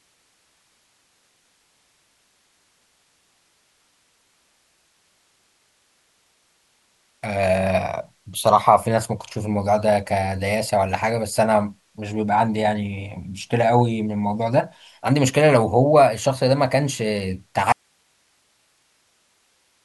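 At 17.72 s the speech cuts out abruptly and does not return before the end, leaving only hiss roughly 45 dB below the programme level. This is an audio dropout to a faint residue, likely from the source signal being lost while the downstream path stayed live.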